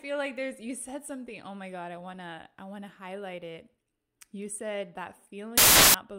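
At 5.58 s, just after "said that", the speech collapses into loud, harsh broadband noise until 5.94 s: samples built from the wrong bytes. The reader misassembled each sample, so the rapidly changing low bits became the dominant part of each value. The waveform jumps to a dense, loud block, and the spectrogram shows broadband energy in place of speech harmonics.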